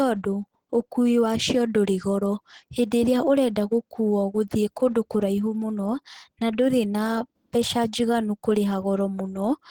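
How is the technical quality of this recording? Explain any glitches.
The quality is limited by audible low-bitrate coding across the whole clip. Throughout, Opus compression, likely at a low rate near 16 kbps, runs in hybrid speech mode. Too few bits leave the speech hoarse and grainy, with rough, noise-filled upper bands. Content still reaches about 20.1 kHz.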